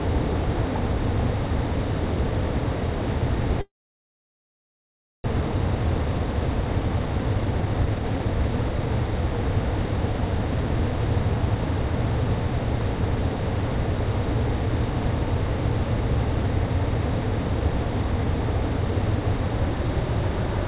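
Long network dropout, 3.61 to 5.30 s: sound smears into a fading buzz, then 1.56 s of silence, likely lost packets; 1.0 s never returns.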